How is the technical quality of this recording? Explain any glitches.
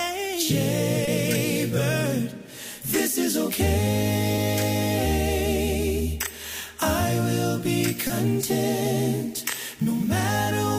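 Three brief glitches mar the recording, at 1.05 to 1.09 s, 4.35 to 4.39 s and 8.07 to 8.11 s. Each is a short smear where the sound briefly wobbles. This is short concealed packet loss: about 20 ms of audio arrived too late, and the receiver filled the gap by extending the preceding sound before blending back.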